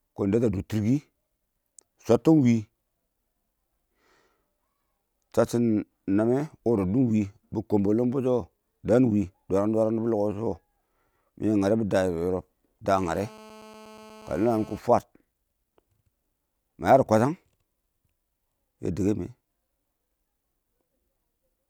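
Speech runs through this clip, and from 12.96 to 14.79 s a GSM phone buzz cuts in: a hard, raspy tone at 217 Hz with a dense stack of harmonics, about 24 dB below the speech and steady throughout, as a nearby 2G handset in a call would produce. Its transmit bursts are rectified by the audio circuit. On a spectrogram it shows as evenly spaced horizontal lines climbing well into the kHz range; the waveform carries a regular pulse train.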